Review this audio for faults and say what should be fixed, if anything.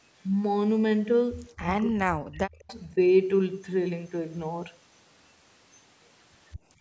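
Speech suppressed in double talk, 1.8 to 2.69 s. The speech drops very deeply while both sides talk. An echo canceller likely turned it down. Use a canceller with better double-talk detection.

Echo leak, 1.82 to 1.9 s and 2.68 to 2.75 s. Faint copies trail by 209 ms, about 25 dB down. Loudspeaker pickup likely escaped cancellation. Use headphones, or lower the far-end loudspeaker volume.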